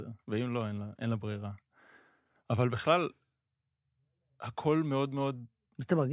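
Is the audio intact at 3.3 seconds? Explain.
Yes, at 3.3 seconds the speech plays through intact, with no dropout, click, distortion or other fault at that moment.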